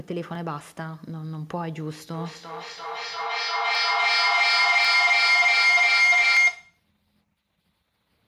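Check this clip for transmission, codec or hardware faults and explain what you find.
Two faults are present in the speech: a sustained feedback howl and four isolated clicks.

Feedback howl, 2.14 to 6.90 s: a microphone picks up a loudspeaker carrying the same call, and each pass round the loop adds level. The sound narrows to a tone around 2 kHz, with a loop delay of roughly a third of a second, and peaks about 12 dB above the speech.

Dropped samples, at 0.35, 3.75, 4.85 and 6.37 s: each is a single sharp click, a thin vertical line across the spectrum. The likely cause is a tiny gap, well under a millisecond, that makes the waveform jump straight to a later value.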